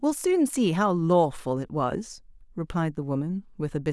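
No technical faults can be heard anywhere in the speech recording.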